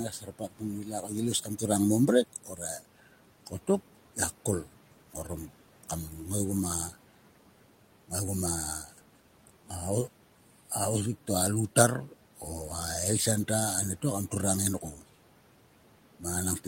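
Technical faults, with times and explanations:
0.11–0.63 s, 0.84–1.11 s, 1.43–1.59 s, 2.33–2.62 s and 14.81–15.04 s: speech cut by the noise suppressor. In each span, parts of the speech drop out for a moment and sound swallowed. The deepest dips reach about 12 dB near the start, and about 6 to 10 dB elsewhere. The suppressor mistook quiet speech for the room noise, which sits about 21 dB below the voice. So it pulled those moments down along with the background.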